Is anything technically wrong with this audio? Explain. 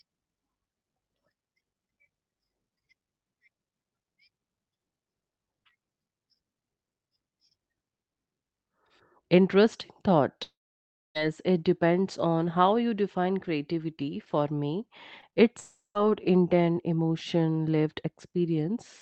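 Yes. There are two kinds of network fault.

Long network dropout, from 10.43 to 11.17 s and again from 15.60 to 15.97 s. The speech gives way to a fading buzz-like continuation of the last sound, then near silence, for about 0.63 s the first time and about 0.15 s the second. The speech then resumes with that stretch missing. This is likely a real network outage, about 0.72 s and 0.36 s long. The receiver stretched the last audio it had, let it decay, and skipped the lost portion.

Short concealed packet loss, at 15.21–15.24 s, 15.30–15.34 s and 15.34–15.38 s, just before the second dropout. Each is a brief smear or wobble in the speech, with a small sound possibly vanishing. About 20 ms of data failed to arrive in time each time. The decoder patched the gap by extending the preceding sound and then blended back into the real signal. The dull top end of the call audio, which fits a codec limited near 8 kHz, is present throughout.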